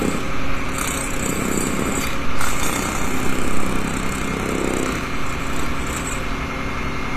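Throughout the clip, the sound likely passed through HE-AAC compression at a low rate, consistent with a bitrate of around 24 kbps. Only the lower spectrum is coded directly, and the treble is rebuilt by copying lower bands upward under a coarse envelope. The top end stays bright but is not the original, and it stops entirely above 14.8 kHz. Harmonics fail to line up across the crossover, so high, noisy detail sounds gritty and metallic, with plainly audible damage.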